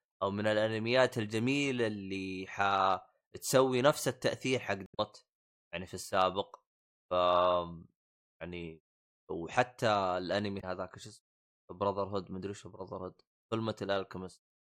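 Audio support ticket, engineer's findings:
Damaged data in compressed stream, 4.84–5.00 s and 10.57–10.64 s in speech. Brief glitch each time. Corrupt bytes in the encoded stream; decoder misreads frames there, loses sync, resyncs on the next frame header. Check file transfer/storage integrity.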